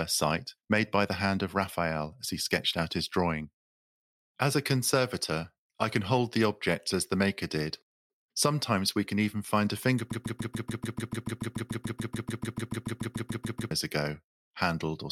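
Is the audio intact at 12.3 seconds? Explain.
No. A broken-record loop runs from 10.12 to 13.71 s: a 145 ms speech fragment repeats back to back 25 times, likely from a stalled player or stream.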